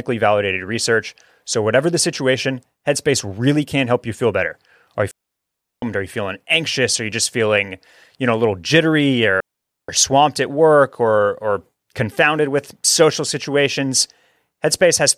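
Speech with two digital wireless dropouts, at 5.11–5.82 s and 9.40–9.89 s: the receiver mutes cleanly for about 0.71 s and 0.48 s, with no surrounding noise bursts.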